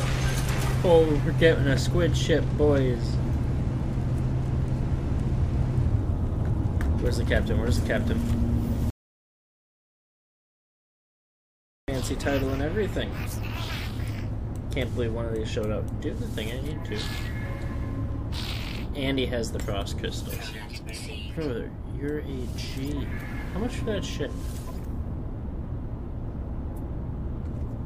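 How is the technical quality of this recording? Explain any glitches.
The recording has one clear glitch. From 8.90 to 11.88 s there is an audio dropout to silence lasting about 3.0 s: the sound stops abruptly, mid-flow, and the gap is silent with no room tone at all. The likely cause is a lost input, such as a disconnected device or broken link, while recording continued writing silence, so whatever occurred in that window is gone.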